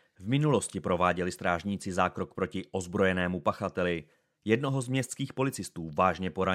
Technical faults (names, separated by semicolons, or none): none